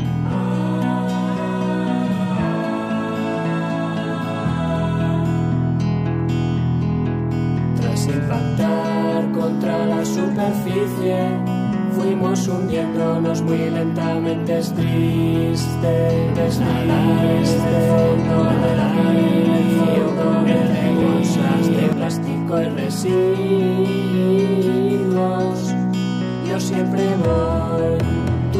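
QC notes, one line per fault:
16.29–21.93 s, doubled audio track: a second full-band copy of the sound runs about two seconds behind the original and at roughly the same level, so everything is heard twice, overlapping itself. The copy is dry, with no decay or room colour, and starts and stops abruptly. It is likely a second capture path or an edit holding two out-of-step copies. On a spectrogram, identical patterns repeat two seconds apart; the waveform is denser, with hard edges at both ends.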